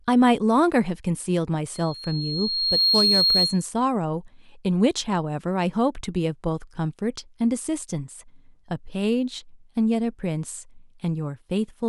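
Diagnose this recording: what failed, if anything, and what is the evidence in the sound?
Loudspeaker feedback squeal, in the analogue acoustic loop between microphone and loudspeaker. From 1.74 to 3.66 s a 4.3 kHz tone swells over about a second to roughly 5 dB above the speech. The loop gain there exceeded one, so the tone fed itself.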